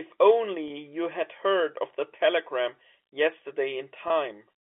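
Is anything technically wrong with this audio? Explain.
Yes. Twice the speech briefly hangs on a slightly held, buzzy tone: from 0.68 to 0.70 s, just before "had heard of the", and again from 4.08 to 4.10 s. This is packet loss with pitch repetition. About 20 ms of audio went missing each time, which fits a single lost packet, and the receiver filled the hole by repeating the last pitch period until fresh audio arrived. The telephone band, roughly 250 Hz to 3.5 kHz, comes from G.711 coding working as intended.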